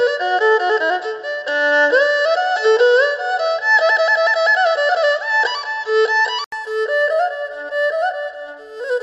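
From the start until 6.52 s, the input was likely switched to a poorer device, a lower-grade microphone or headset path that passes nothing above 7.6 kHz. Through this stretch the sound is dull and boxy, with a faint background noise of its own, well below the signal, and a level a few decibels off. At 6.52 s an 80 ms silence marks the switch back, after which the top end opens out again.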